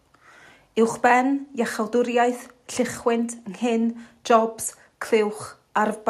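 No technical faults can be heard anywhere in the speech recording, and the signal stays steady from its first moment to its last.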